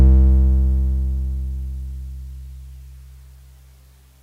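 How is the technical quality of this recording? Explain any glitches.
No technical faults can be heard in this music recording. There are no glitches to explain.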